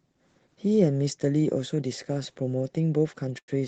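Short stall from a late packet, 3.38 to 3.50 s: the jitter buffer ran empty, so the last sound was held 99 ms before speech resumed intact.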